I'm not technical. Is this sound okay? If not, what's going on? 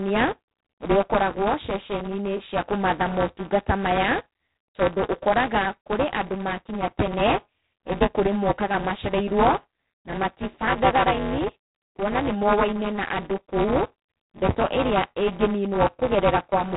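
No, it isn't. Two faults run through the whole clip, from start to finish.

The first is buffer tearing. The speech has a mechanical, robotic rattle riding on it, repeating about 200 times a second, which points to a playback buffer roughly 5 milliseconds long. The program filling that buffer and the sound hardware reading it have drifted out of step, so in every cycle a small slice of audio about a hundredth of a second old gets spliced in with hard edges. That produces the buzz, and it appears only while there is speech.

The second is G.726 ADPCM coding, the kind used by cordless and telephone systems. Instead of storing the sound itself, it stores how far each moment misses a guess based on the sound so far, using very few bits for each one. Here those corrections are coarse enough to add a rough, rasping hiss that rises and falls with the speech. Everything above about 3.9 kHz is gone, which gives the speech its thin, phone-line quality.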